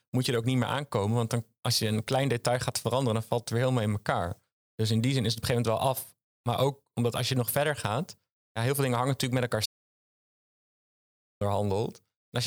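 A speech clip with an audio dropout to silence from 9.66 to 11.41 s: the sound cuts off mid-flow and about 1.75 s is gone, with no room tone left. The waveform shows a flat line and the spectrogram a blank band, likely from a lost input.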